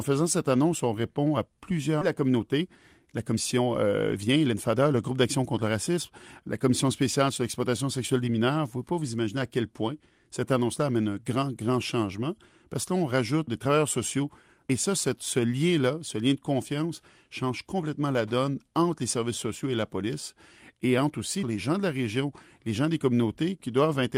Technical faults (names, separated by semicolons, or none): skip ahead; jitter buffer speed-up